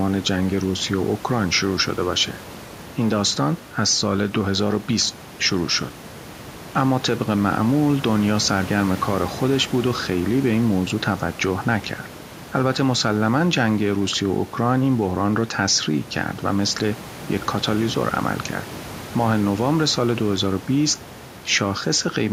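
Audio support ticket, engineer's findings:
Nothing stood out on listening to this speech recording, with the room's own background noise audible beneath it as part of the recording rather than anything added by the system.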